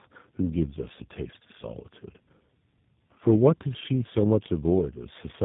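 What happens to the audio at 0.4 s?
At 0.4 s the speech is inside a tandem speech coding fault that runs through the whole clip. The call was decoded and re-encoded at each network border, passing through three low-rate speech coders in a row, a chain that fits two GSM full-rate stages followed by G.729A. Each coder re-models the previous one's errors, so the speech sounds rough, muffled and warbly, with nothing above 3.8 kHz.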